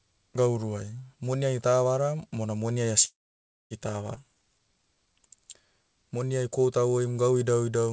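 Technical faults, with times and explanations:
3.05 to 3.74 s, call audio freeze: the sound stalls for about 0.66 s, with the last bit trailing off and roughly 0.58 s of that pause going silent. It then resumes right where it stopped, likely because packets were held up and the jitter buffer ran dry.
4.16 to 4.19 s, skip ahead: playback jumps forward with only a tiny 8 ms join, and around a fifth of a second of audio is simply gone. Later packets were already queued, so the stretch was dropped and the two sides were butted together.
4.24 to 6.10 s, jitter buffer slow-down: the sound runs at about 89% speed with unchanged pitch, so sounds are drawn out. The buffer was rebuilding its reserve, repeating pitch periods to add about 214 ms in total.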